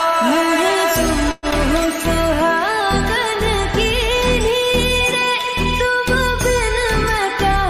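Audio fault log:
1.31–1.46 s, call audio freeze: packets were likely held up in transit, draining the jitter buffer; the last sound stretches about 0.11 s into a fading buzz, then resumes intact.
1.51–1.55 s, short concealed packet loss: about 40 ms of audio missed the decoder, so the receiver patched the hole and blended back, leaving a brief smear.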